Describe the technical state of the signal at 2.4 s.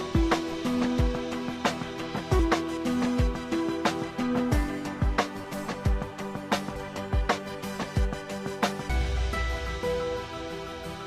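At 2.39 s there is damaged data in the compressed stream: a stretch of bytes was lost or corrupted, so the decoder misread or rejected those frames, lost sync and hunted for the next valid frame header. This momentary fault is heard as a brief glitch, a chirp, squawk, click or short hole in the sound.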